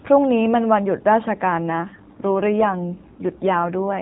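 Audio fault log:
1.58 s to end, AMR rate drop: from 1.58 s onward the speech turns rougher, buzzier and more synthetic, with no gap and no narrowing of the band, which stays capped below 4 kHz as the AMR narrowband mobile codec requires. The change fits the codec stepping down from about 12.2 to 5.9 kbps on a weak link, moving bits into error protection, so fewer pulses describe each frame's excitation and the voice loses natural texture for the rest of the clip.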